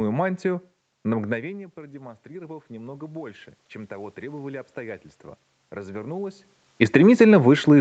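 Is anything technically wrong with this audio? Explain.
Yes. From 1.31 to 5.11 s there is automatic gain rising. When the talker moves away near 1.5 s, the input drops about 18 dB, and the gain control slowly adds about 8 dB. The room noise swells with the speech, which a talker simply coming closer would not cause.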